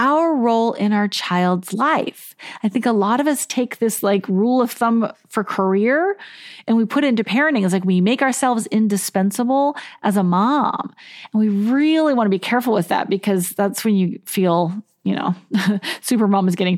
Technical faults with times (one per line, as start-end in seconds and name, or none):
none